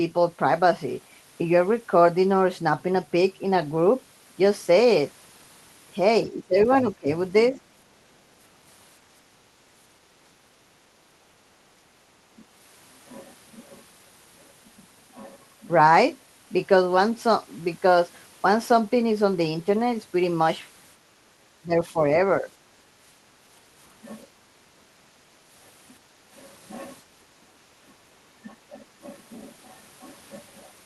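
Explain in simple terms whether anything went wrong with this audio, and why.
Speech suppressed in double talk happens four times: at 6.3 to 7.09 s, 21.64 to 22.01 s, 22.41 to 22.49 s and 27.81 to 28.79 s. The voice dips or thins out, most strongly near 6.3 s. The likely cause is both sides talking at once, so the echo canceller turned the talker down along with the echo.

Background gated by the echo canceller happens at 24.27 to 25.22 s and briefly at 27.42 to 27.53 s. The room sound drops and then returns. While the loudspeaker was playing, the echo canceller clamped the microphone down hard and then let go.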